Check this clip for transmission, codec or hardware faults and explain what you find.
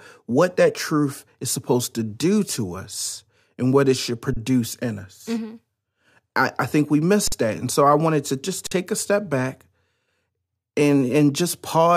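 Three brief dropouts, all the same fault: an underrun with held sample. The speech freezes flat for 30 ms at 4.34 s, between "and what it should" and "in us"; for 46 ms at 7.28 s, after "I think we miss"; and for 46 ms at 8.67 s, between "I wanted to just" and "take a step back". Each stops with little or no click and resumes softly, because nothing was skipped. The output buffer ran dry and the converter held its last value until data returned. The 46 ms gaps fit a 2048-sample buffer.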